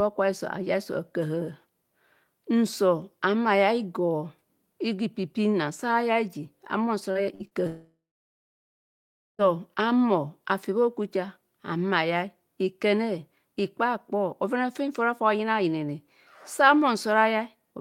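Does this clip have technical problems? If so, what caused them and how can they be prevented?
Yes. Short concealed packet loss occurs at 7.11 to 7.18 s and again at 7.47 to 7.54 s. Each time about 40 ms of speech failed to arrive, and the receiver bridged it by extending the preceding sound, leaving a brief smear before the speech blends back in.

A burst of packet loss runs from 7.35 to 7.43 s. Roughly 40 ms in a row went missing, and the decoder stretched the last sound over about 45 ms while lowering its level, so the speech jumps ahead slightly when it returns.

A long network dropout spans 7.67 to 9.42 s. The cause is likely a stall in the network connection. The concealment holds the last sound only briefly before fading, and about 1.4 s of near-silence follows. Speech resumes with roughly 1.7 s lost.

A more stable connection, such as wired rather than congested Wi-Fi, with a larger jitter buffer and forward error correction enabled, would prevent these losses.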